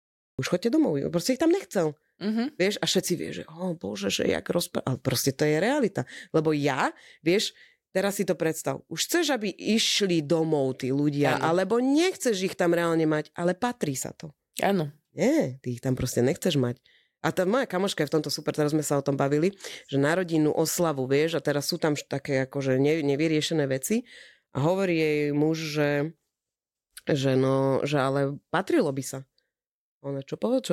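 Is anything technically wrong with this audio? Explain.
Yes, there's a cut-off start. The first 0.39 s is dead digital silence, and then the speech just appears mid-sound at 0.39 s with no natural attack or fade-in. What's happened is the recording or stream kicked in late, so whatever was already being said got chopped off at the front and the capture only picks it up partway through. You hear it as a hard, abrupt entry rather than a proper beginning.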